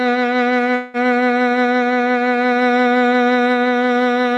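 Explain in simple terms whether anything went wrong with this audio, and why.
At 0.75 s the music stalls for about a fifth of a second, until 0.97 s. The last sound is stretched into a fading buzz. Then the music resumes where it stopped, with nothing lost, about 185 ms late. This is a call audio freeze, likely from delayed packets leaving the playback buffer empty.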